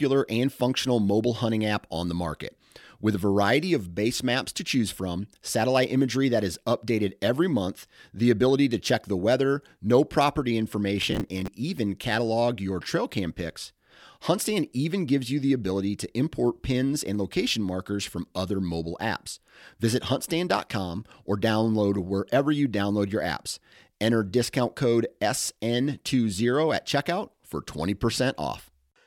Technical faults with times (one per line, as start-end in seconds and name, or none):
11.02-11.48 processor overload crackle